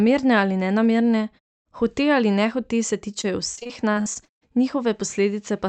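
From 3.21 to 4.52 s the speech turns choppy and robotic, with eleven short dropouts, the longest 47 ms. This is repeated packet loss: audio packets through the Opus call path went missing one after another, and each hole was patched by stretching the preceding sound.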